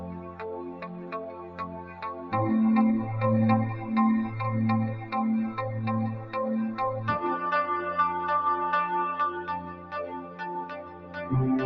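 A noise suppressor built for speech stays active across the whole clip, treating sustained and decaying sound as noise. Its gain swings by roughly 15 dB, so held parts pump and thin out while sharp onsets pass largely intact. Sound is cut by the noise suppressor most heavily from 0.0 to 2.33 s (about 10 dB down), 6.16 to 6.35 s (about 8 dB), 9.59 to 10.41 s (about 11 dB) and 10.62 to 11.31 s (about 10 dB). There, steady sound sinks and decays end early.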